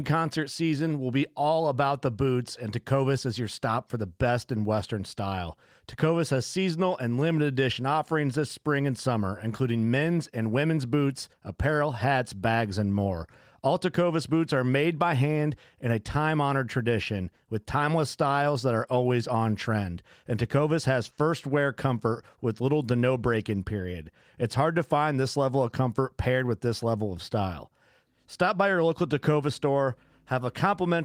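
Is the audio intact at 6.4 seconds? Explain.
Yes, at 6.4 seconds the speech is intact, with no dropout, click or other fault at that moment.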